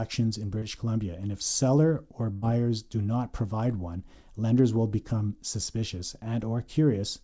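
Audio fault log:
0.59–0.65 s, short concealed packet loss: about 30 ms never arrived and was filled by continuing the last sound, heard as a brief smear.
2.33–2.45 s, burst of packet loss: after "and if seller or", about 90 ms is missing. The last sound is held and fades, and then resumes at "do not provide one". The spectrogram is empty above 8 kHz here as across the whole call.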